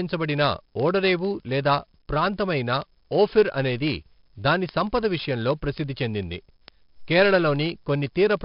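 Speech with heavy 4-bit ADPCM compression throughout: gritty hiss rides every loud syllable, and a spectrogram shows level-tracking broadband noise with nothing above 5.3 kHz.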